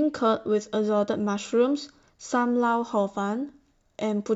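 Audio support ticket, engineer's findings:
Listened to the full speech clip and nothing stood out as a problem.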